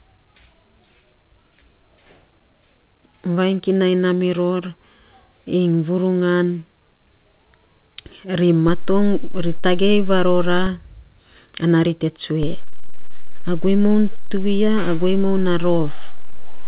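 Low thumps at 8.68 s and 10.67 s mark a DC step, the waveform's zero line jumping away and later returning. Another thump at 12.43 s, just after "ana ri te", starts a second offset that holds to the end. The speech continues unchanged throughout.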